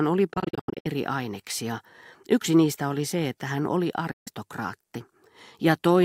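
From 0.34 to 0.87 s the speech breaks up into a cluster of short silent holes, about 320 ms lost in all, the longest near 85 ms. At 4.11 s about 150 ms more is lost, ending at 4.28 s. Each hole starts and stops either abruptly or with a fade of a few milliseconds, and the speech resumes further on as if it had kept playing. This is likely a Bluetooth dropout, where audio packets reached the headphones too late and were discarded.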